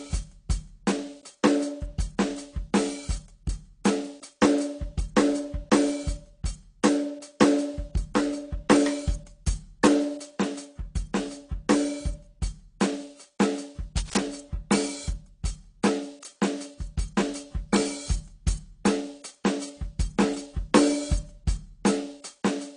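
From the start, the music is dull and smeared, with nothing above 10.2 kHz. Sustained tones warble and fizz. This likely comes from AAC compression at a low bitrate, near 32 kbps.

From 13.97 to 14.19 s, a burst of uneven scratching rides over the music, roughly 10 dB below it. This is cable scratch noise, likely from a worn contact being moved.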